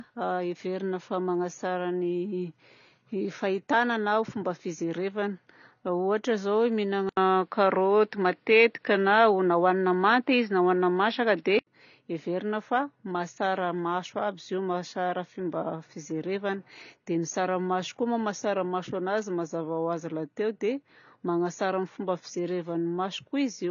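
This 24-second speech clip carries AAC compression throughout, likely AAC-LC at a low bitrate that fits about 24 kbps. The codec damage is plainly audible as a dull, smeared quality, and nothing survives above 7 kHz. On a spectrogram this shows as a hard horizontal ceiling at 7 kHz across the whole clip, with a blotchy, quantised texture in the bands below it. From 7.09 s to 11.67 s the input switched to a poorer device, likely a different microphone or a headset's call profile. The band narrows further, so nothing remains above 5.6 kHz. The level shifts by about 5 dB, and the new device brings its own background noise roughly 50 dB below the speech. The changeover also leaves an 80 ms gap. On a spectrogram the ceiling drops from 7 kHz to 5.6 kHz for that span and returns afterwards, with a changed noise floor. The waveform shows a step in level and a brief flat gap at the switch.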